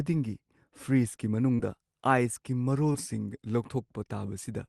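Short concealed packet loss at 1.55 to 1.61 s and 2.93 to 2.96 s: about 40 ms and 20 ms of audio arrived too late, so the decoder extended the preceding sound and crossfaded back, heard as brief smears.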